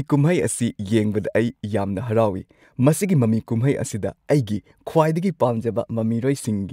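A drift correction step runs from 5.45 to 6.45 s: the speech suddenly plays 6.2% fast and about 105 cents sharp, then snaps back. This is likely clock-matching software stepping the playback rate at once to rebalance its buffer, shifting speed and pitch together.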